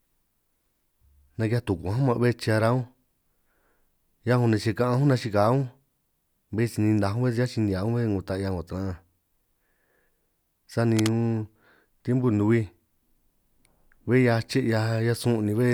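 A worn cable or connector likely shifted at 10.94 to 11.10 s, producing cable scratch noise: a brief, uneven burst of scratching roughly 10 dB below the speech.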